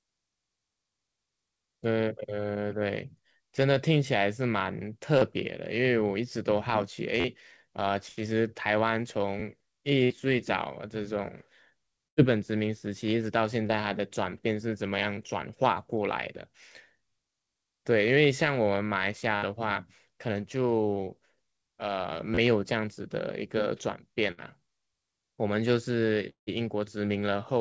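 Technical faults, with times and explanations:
5.18–5.24 s and 13.67–13.72 s, short concealed packet loss: each is a brief smear or wobble, where a short consonant can slip away. About 30 ms of the call reached the decoder too late both times. The receiver bridged the hole by carrying the preceding sound forward, pitched if voiced and as shaped noise if not, for about 35 ms and then about 22 ms, before blending back into the real signal.
7.20–7.25 s and 22.35–22.38 s, repeated buffer: a quick stutter, almost a brief buzz, with a hard join at each repeat. Fresh audio wasn't ready, so the device replayed its last block of about 11.6 ms, four extra times at 7.20 s and three at 22.35 s. That block length fits a 512-sample buffer. Because the repeats were inserted rather than substituted, almost nothing of the original sound goes missing.
10.04–10.13 s, 12.08–12.20 s, 19.36–19.45 s and 24.31–24.40 s, burst of packet loss: a held buzz or a fading hiss, after which the sound picks up further along with a piece skipped. 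Several packets in a row were lost or arrived too late, about 60 ms each time and about 90 ms at 12.08 s. The receiver stretched the last sound over roughly 54, 89, 66 and 59 ms, turning it down as it went. The call band itself stops at 8 kHz, as expected from a wideband call codec.
26.29–26.50 s, long network dropout: the sound turns into a buzz or hiss that fades, then drops to about 0.12 s of silence before audio returns further on. Around 180 ms never plays. This is likely a dropout in which nothing arrived for that stretch, so the receiver extended the last sound for about 173 ms, letting it die away, and had nothing left to fill the rest.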